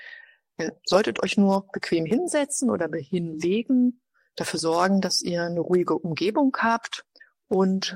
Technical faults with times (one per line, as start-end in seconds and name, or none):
2.11 audio missing between chunks
4.59 audio missing between chunks
7.07 audio missing between chunks